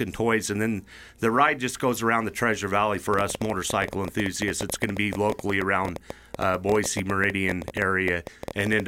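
Likely interference from nearby equipment or a faulty connection injects a train of clicks from 3.14 s to 8.81 s: some seventy similar pulses at about 11.8 per second, irregularly spaced, peaking about 10 dB above the speech, heard as uneven ticking over speech and pauses alike.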